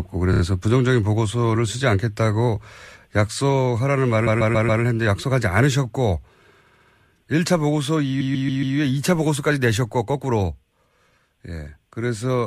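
Four stutters from repeated frames: a 19 ms block plays three extra times at 0.32 s, a 139 ms chunk loops four more times at 4.26 s and 8.20 s, and a 70 ms chunk does the same at 6.66 s. The decoder replays identical compressed frames, giving stammers that stretch the speech by up to 0.56 s.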